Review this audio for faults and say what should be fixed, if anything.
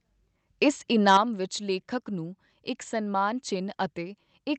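Microphone overload from 1.07 to 1.17 s, just before "ਵਿਚ ਲੇਖਕ ਨੂੰ ਇਕ": the loudest speech peaks are driven about 6 dB past full scale, so their tops are sheared off and a harsh, crackling edge rides on those syllables. On the waveform the peaks are flat-topped across roughly 7% of samples. The spectrogram shows smeared broadband energy in vertical streaks there, the harmonic distortion from the squared-off tops, likely from an input gain set too high for loud moments. To prevent it, set the microphone gain so the loudest speech peaks well below full scale.

Microphone volume stepped down at 1.17 s, right as the clipping ends and before "ਵਿਚ ਲੇਖਕ ਨੂੰ ਇਕ": speech and background both fall by about 7 dB in one abrupt move rather than a smooth fade. This is likely the call software's automatic gain control reacting to the distorted peak by cutting the device's input volume. The waveform envelope drops in a single stair-step at that instant, and the spectrogram dims uniformly across all frequencies from there on. 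To prevent it, start with a correct manual input level so the automatic gain control has no overload to correct.

The Opus call path is working normally, with content reaching about 8 kHz.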